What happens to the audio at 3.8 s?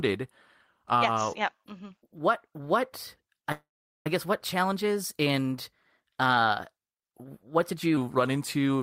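The sound freezes. From 3.52 s to 4.07 s the last moment is stretched into a brief fading buzz or hiss and then about 0.41 s of silence, after which the audio resumes exactly where it left off, with nothing lost. This is a call audio freeze. Packets were likely held up in transit, so the jitter buffer ran dry and the receiver filled the roughly 0.54 s wait before carrying on.

The same moment also sits inside a section at the wrong speed, running from 1.95 s to 7.97 s. There the audio is hurried and raised by about two semitones because it plays 1.12 times too fast, the likely result of being fitted to the wrong clock.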